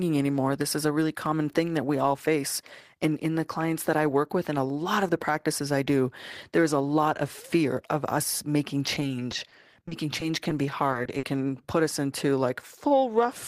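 Speech with repeated packet loss (robotic sound) from 8.94 to 11.24 s: 21 gaps up to 50 ms, each patched by repeating sound, so the spectrogram shows choppy, smeared, repeated slices.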